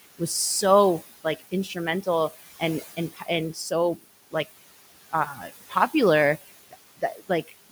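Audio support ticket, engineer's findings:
Noise suppressor artifacts throughout. Background cut by about 17 dB between phrases, rising under speech. Frame-by-frame band gating by suppressor.

Speech cut by the noise suppressor at 1.24–1.76 s after "was so", 2.82–3.28 s, 5.34–5.5 s. Brief soft sounds swallowed, dips about 13, 15, 6 dB. Suppressor misreads quiet speech as noise; room noise about 16 dB below speech.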